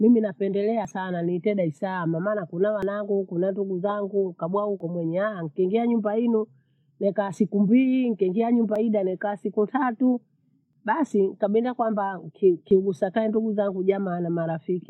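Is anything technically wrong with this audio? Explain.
Yes, the speech has a recurring dropout: audio missing between chunks. Tiny skips land at 0.85, 2.83, 4.80, 6.78, 8.76, 10.73 and 12.71 s, about every 2 seconds. Each one drops around 20 ms, and the audio on either side is butted together with no gap, so the speech jumps forward slightly. The likely cause is a recorder or processor working in 2-second blocks and losing a sliver each time it hands off to the next.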